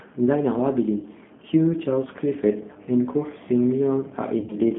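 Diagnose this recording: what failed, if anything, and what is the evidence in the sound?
The codec stage is at fault: this speech has passed through a G.729 codec at 8 kbit/s. The line band runs from about 150 Hz to 3.5 kHz, with nothing above it. The voice has the plainly audible rough, slightly synthetic grain of a coder that rebuilds each 10 ms frame from a vocal tract filter, a pitch predictor and a few pulses. A plain telephone band-limit would narrow the sound without this buzzy, rebuilt texture.

The network stage also failed, causing VoIP packet loss concealed by the speech codec. At 1.00–1.06 s and 2.73–2.77 s the voice is briefly stretched into a buzzy tone or a coloured noise that fades, fitting about 30 ms and 20 ms of lost audio. At 4.40–4.57 s about 90 ms is lost, scattered over 120 ms with the longest gap about 40 ms. The decoder extends its last pitch and filter at falling gain. 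Unlike a dropout, there is no silence or click, only stretched, weakened speech that recovers slowly.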